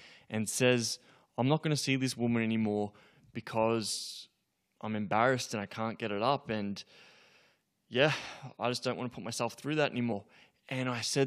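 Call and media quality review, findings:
Compressed frames skipped at 10.11 s in speech: audio jumps forward by roughly 50 ms, about two frames of 23.2 ms each, leaving a brief discontinuity at the join. Probable component is the decoder or file, with frames missing or rejected as damaged.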